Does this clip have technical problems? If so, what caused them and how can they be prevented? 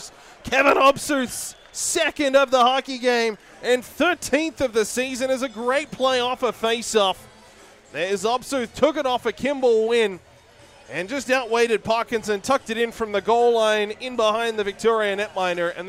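No, nothing stood out as a technical problem on listening, so there is no cause to trace and nothing here that needs preventing.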